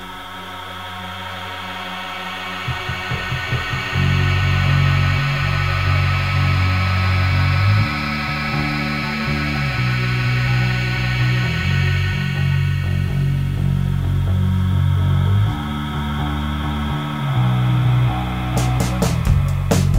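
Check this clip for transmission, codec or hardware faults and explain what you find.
There's one fault, and it runs the whole way through: low bit depth without dither. Quiet passages sound gritty and grainy, with the roughness tracking the sound itself, around 30 dB below the signal. That's likely plain truncation to something like 8 bits, with no dither to decorrelate the error.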